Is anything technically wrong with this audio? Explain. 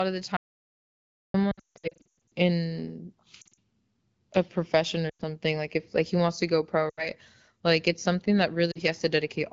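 Yes, two things. At 0.37 s, right after "of the", there's an audio dropout to silence lasting about 0.98 s. The input was likely lost for a moment while recording carried on writing silence, so the speech cuts off into dead digital silence with no room tone until 1.34 s.

Then there are lost AMR speech frames at 1.51–2.06 s, 3.41–3.54 s, 5.09–5.22 s, 6.89 s (after "wants to go pro") and 8.71 s (after "it's something that"). The decoder covers each failed frame by stretching the last good one with fading gain. The first burst is worst: about 560 ms lost across 800 ms, with runs up to 160 ms that drop to near silence. The later ones are shorter warbles and dips of 40 to 120 ms. Underneath all this, the wideband sound fits AMR-WB at around 12.65 kbit/s.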